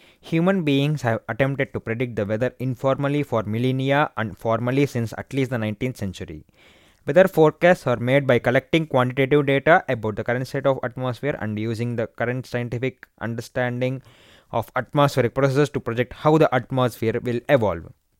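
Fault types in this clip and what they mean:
Nothing in the speech stood out as a problem on listening.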